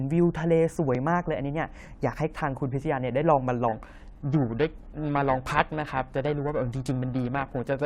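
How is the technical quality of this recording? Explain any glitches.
The recording has one clear technical fault, which affects the second half of the speech.

From 3.68 s to the end, the sound takes on a rough, metallic edge that is most noticeable on bright, high-frequency parts of the speech and disappears in the pauses. This is periodic clock jitter: interference wobbles the converter's sampling clock at around 1 kHz, so every component of the sound gains sidebands spaced about 1 kHz above and below it. The higher the frequency, the stronger those sidebands become.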